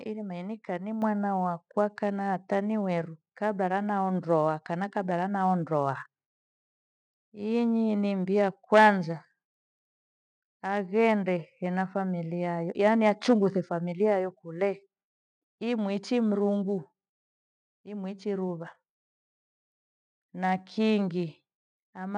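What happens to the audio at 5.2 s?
Nothing goes wrong at 5.2 s: the speech carries on intact through that moment, with no dropout, click, distortion or other fault to be heard.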